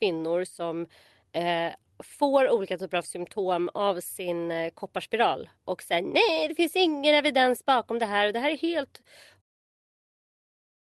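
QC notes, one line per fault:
No faults found.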